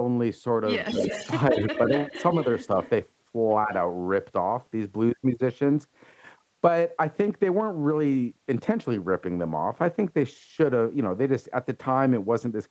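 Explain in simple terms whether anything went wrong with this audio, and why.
Two things went wrong, and both likely come from a call where one person was on a loudspeaker.

First, an echo leak. The far side's echo canceller failed to remove all of the sound its microphone caught from its own loudspeaker, so some of it was sent back. You hear a delayed copy of the speech trailing about 0.16 seconds behind, from 0.84 to 1.32 s, then from 1.51 to 2.67 s, fainter at that point, and as a barely audible scrap from 2.83 to 2.9 s.

Second, speech suppressed in double talk. When both people spoke at once, the echo canceller mistook the real talker for echo and turned the speech down along with it. The speech briefly dips and sounds pushed back at 0.85 to 1.03 s, 1.52 to 1.74 s, 2.11 to 2.15 s and 3.66 to 3.72 s. The first two dips are the deepest. They fall right where the echo starts.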